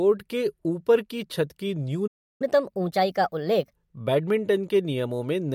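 At 2.07 s, right after "ऊपर की छत की", the speech drops out for about 0.33 s until 2.42 s. This is a playback stall, likely the player starving for data. On a waveform it is a flat gap; on a spectrogram, an empty vertical band.

From 2.42 s to 3.73 s comes catch-up at higher speed: the backlog is resampled at 1.25x, so the speech rushes and rises by roughly four semitones. A spectrogram shows harmonics shifted upward and compressed in time, settling back at 3.73 s.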